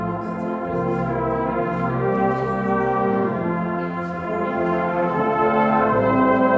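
Nothing in the audio stood out as a technical fault on listening.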